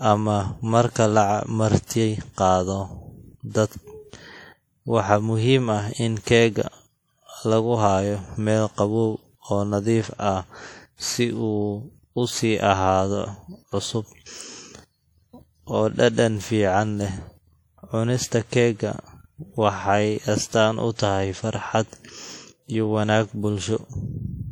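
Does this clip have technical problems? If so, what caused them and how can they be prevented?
Yes. The speech runs through a low-bitrate audio saved at a high bitrate fault for the whole clip. The file is a high-rate MP3, but the sound points to an earlier low-rate stage, likely a WMA encode near 48 kbit/s. That first pass discarded detail for good. The second encode, at a rate that fits about 192 kbit/s, keeps its artefacts and cannot restore anything. The spectrum reaches about 20.1 kHz, so it shows no low cut-off. To prevent this, always encode from the original lossless source rather than re-encoding an existing low-bitrate file.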